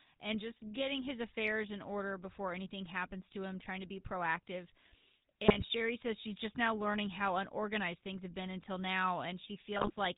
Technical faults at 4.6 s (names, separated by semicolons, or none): GSM full-rate codec